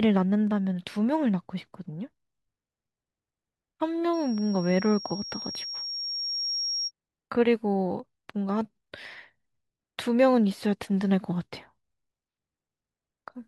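From 4.13 to 6.92 s there's loudspeaker feedback squeal: the mic is hearing its own speaker, and the loop gain tops one at 5.6 kHz. That tone swells over about two seconds into a piercing whistle sitting only a little below the speech.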